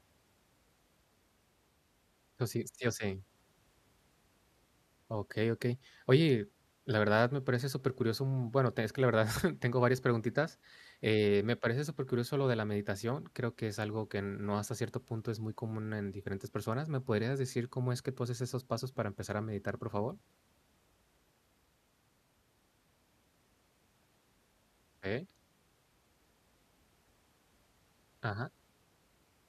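Speech recording, no technical faults detected anywhere in the clip.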